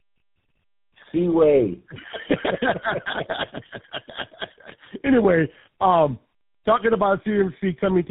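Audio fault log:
Throughout: tandem speech coding. Speech is rough, muffled and warbly, with nothing above 3.8 kHz. This fits three speech codecs each recoding the previous one's output.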